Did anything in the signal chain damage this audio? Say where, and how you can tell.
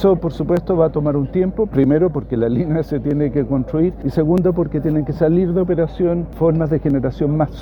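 Yes. It looks like the driver or buffer stage. From about 0.57 s to 6.90 s there's a regular click roughly every 1.27 s, around seven of them, evenly spaced whatever the sound is doing. That steady rhythm points to clock drift buffer slips, likely from two devices running on independent clocks a few hundred ppm apart. The buffer between them creeps full or empty, then drops or repeats a few tens of samples, and each slip lands as a tick.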